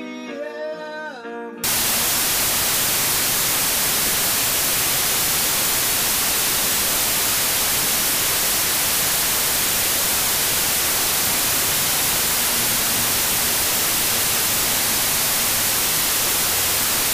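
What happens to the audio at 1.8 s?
A wrong sample width fault begins at 1.64 s and runs to the end of the clip, so it is already under way at 1.8 s. Each stored sample is being split into two shorter ones, which fits 32-bit data read as 16-bit. Half of those values come from low-order bytes that are effectively random, giving loud hiss. The original sound is buried underneath, playing at half speed and an octave low.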